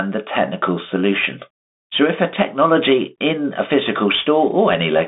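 This speech clip has passed through a Bluetooth CVSD headset codec for its whole length. CVSD sends one bit per sample, each saying only up or down, with a step size that adapts, a scheme that fits a 64 kbps headset link. The band runs from 200 Hz to about 3.7 kHz and nothing above 3.8 kHz survives, so the speech sounds boxed in. Loud high sounds outrun the step and distort, s sounds come out scratchy, and a granular hiss sits under the speech.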